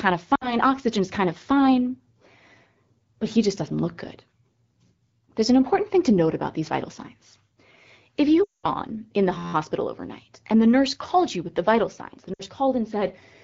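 Lost AMR speech frames at 0.35 to 0.58 s: a radio error corrupted the frames, so the decoder filled the 60 ms gap, about three 20 ms frames, by repeating its last good pitch and vocal tract settings at falling gain. The speech smears briefly, then thins out. A longer run of lost AMR speech frames follows at 8.44 to 8.68 s, covering 200 ms, or about ten frames. Being wideband, the concealment fades quickly, so the stretched sound drains away into near silence before the speech returns weak or rough.

System hang loop at 9.38 to 9.53 s: the system froze while the sound hardware kept replaying its ring buffer. An 11.61 ms slice of audio repeats 13 times, which fits a 512-sample buffer. At 86.1 Hz the repetition fuses into a steady buzz. Essentially no speech is lost, because the audio resumes where it stopped.

Lost AMR speech frames at 12.33 to 12.42 s: another 60 ms gap, again about three frames. 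The decoder again stretches the last sound and lets it fade.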